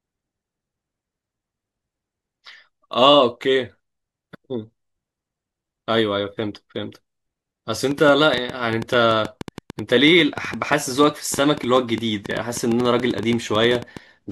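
Likely interference or a faltering interface injects a train of clicks from 7.91 to 13.98 s: about fifty irregular pops, 7.6 per second, poking above the speech.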